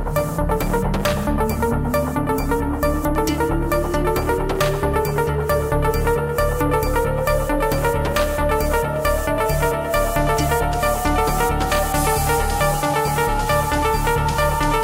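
A scratch on the disc wipes out more data on each revolution than the player's error correction can rebuild, so it interpolates or mutes the damaged samples. The result is CD scratch ticks: four brief clicks, each no longer than about a millisecond, recurring with the disc's rotation between 2.78 and 3.34 s.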